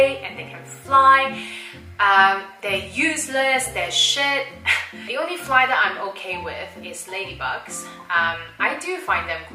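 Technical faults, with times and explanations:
No technical faults are audible anywhere in the recording.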